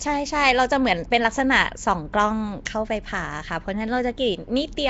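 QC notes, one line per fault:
throughout: Nellymoser compression. Speech carries a rough, hissy halo and a smeared, underwater texture, with nothing above 7.7 kHz. Coarse fixed-precision block coding starves weak bands, which are filled with noise. The damage is plainly audible and likely comes from Nellymoser Asao at a rate around 32 kbps.
2.65 s: pre-echo. A brief hiss of about 12 ms precedes a sharp attack, which sounds softened. The transform block spreads the quantisation noise sized for the loud onset across the whole block, so that noise also fills the quiet moment just before the attack.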